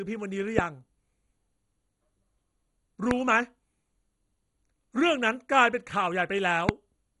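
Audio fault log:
Throughout: MP2 compression. The speech sounds dull and grainy, with a gurgling edge. Nothing is heard above 11.2 kHz. The likely cause is heavy MPEG Layer II coding, at a rate that fits roughly 56 kbps. The coder divides the spectrum into 32 sub-bands and shares out a small bit budget. The upper bands get nothing and go silent. The bands that remain are quantised coarsely, which produces the granular distortion.
0.59–0.61 s, 3.11–3.13 s and 6.69–6.71 s: loud pop. Each is a single sharp click lasting about 20 ms. Each peaks around 20 dB above the speech, which carries on underneath. A sudden voltage step or spike, likely from a switch, static discharge or driver glitch, is added to the signal. The circuits after it shape that edge into a short, hard pulse, which is heard as a pop.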